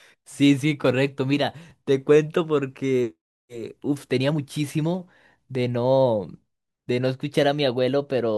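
At 1.7 s the speech gives a tiny hard click with a brief buzzy edge, too short to register as a stutter. This is a repeated buffer. Fresh audio failed to reach the output in time, so the device played its previous block once more. The doubled piece is about 10 ms long, which fits a 10 ms buffer, and the hard joins at each repeat make the click. Around a hundredth of a second of real audio is lost behind it.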